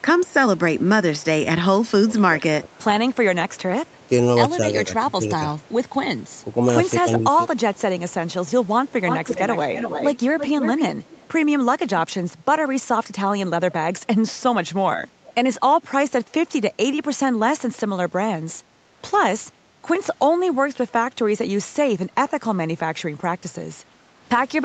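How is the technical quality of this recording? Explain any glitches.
The recording has audible call-processing faults: returning echo, speech dips during overlap, and one brief background dropout, all within a call path that stops at 8 kHz.

Echo leak, 1.88–4.06 s, 5.62–11.29 s and 14.28–15.34 s: the far end's echo canceller likely let loudspeaker pickup through. Delayed speech copies return 220 ms late, roughly 35 dB down and then roughly 10 dB down, then 391 ms late at roughly 25 dB down.

Speech suppressed in double talk, 2.04–5.42 s and 7.02–7.25 s: with both sides talking, the canceller likely mistook the talker for echo. The speech dips, by up to roughly 15 dB for about a second in total, then briefly by roughly 10 dB.

Background gated by the echo canceller, 18.66–18.79 s: the canceller clamped the microphone while the loudspeaker played, so the room sound drops by about 6 dB for about a tenth of a second before returning.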